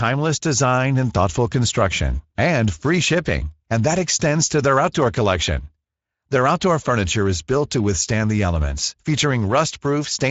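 Speex codec damage runs through the whole clip: the speech has been squeezed through a CELP coder with too few bits for the excitation, which fits a bitrate near 17 kbps, leaving it noisy and hoarse, with nothing above 7.7 kHz.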